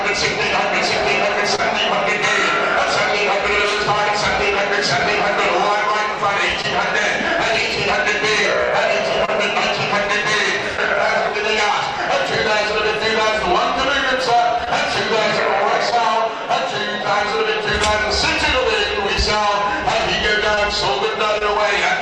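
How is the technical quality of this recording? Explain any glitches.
Technical quality takes a few small hits from network packet loss. There are brief patched dropouts through the clip and one short cluster of them.

Short concealed packet loss turns up at 1.55, 6.62, 9.25, 20.55 and 21.39 s. Each time, about 20 ms of audio never reached the decoder in time. The receiver bridged the hole by extending the preceding sound and then blending back in, so you hear a quick smear or wobble.

Scattered short gaps run from about 14.6 to 16.0 s. Roughly three separate packets went missing there, about 40 ms in all with the longest around 20 ms, and each one was patched by carrying the last sound forward. The result is a few hiccups across that stretch, while the sound between them stays clear.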